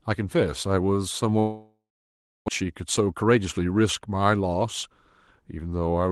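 At 1.39 s the speech breaks off. The last sound is stretched into a fading buzz, then silence, until 2.50 s. About 0.96 s of speech never returns. The likely cause is a long network dropout, with nothing arriving for over a second.

From 2.60 to 3.53 s the speech runs about 11% fast at unchanged pitch, sounding hurried. This is a jitter buffer speed-up. Short pitch-period pieces are cut repeatedly, trimming roughly a tenth of a second of built-up delay.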